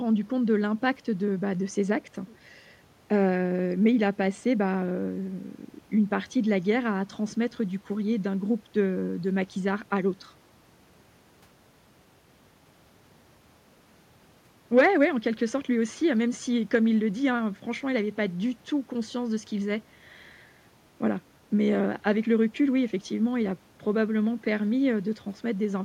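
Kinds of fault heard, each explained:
Nothing stood out as a fault on listening to this speech recording.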